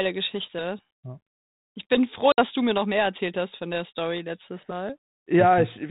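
At 2.32 s, just after "bin froh", the speech drops into a hard-edged silent gap. This is packet loss on an ADPCM call. About 60 ms of audio is lost, which fits roughly three packets. The decoder's adaptive predictor and step size then no longer match the sender's. Speech returns near 2.43 s, before "du mir noch mehr", slightly distorted. It settles within some tens of milliseconds. The G.726 coding runs at 32 kbit/s, with light codec damage.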